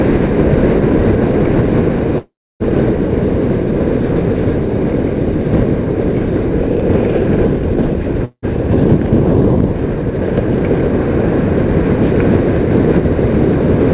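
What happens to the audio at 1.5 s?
Nothing goes wrong at 1.5 s; the audio continues intact through that moment, with the narrow call-path band that stops at 4 kHz.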